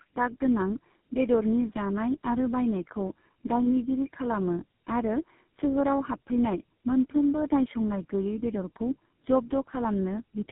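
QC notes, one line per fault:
Throughout, tandem speech coding: the speech passed through three low-rate speech codecs in a row, GSM full rate at 13 kbit/s, then AMR-NB at 6.7 kbit/s, then GSM full rate again, each decoded to G.711 mu-law and re-encoded at the link borders. Every coder works on the previous one's errors, so roughness, muffling and warble pile up beyond what a single codec gives. Nothing above 3.8 kHz survives. That stacked, layered smearing is what distinguishes it from one low-bitrate pass.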